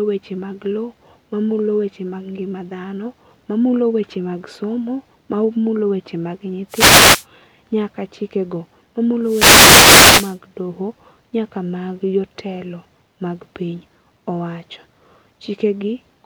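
At 6.69 to 7.26 s, and again from 9.23 to 10.39 s, the speech is hit by a wireless microphone noise hit: the FM radio link fades as reflected signals cancel, so receiver hiss surges over the voice for roughly half a second, then just over a second. Each sounds like a swish of static. A spectrogram shows broadband noise filling the whole band, and the waveform shows a thickened, fuzzy floor.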